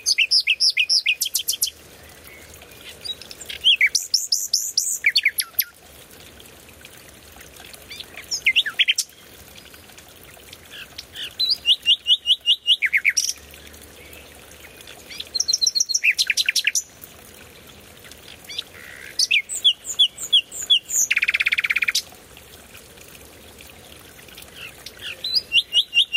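Gain pumping runs throughout: the gain swings around 10 dB with each loud sound, likely from excessive input gain driving a fast limiter.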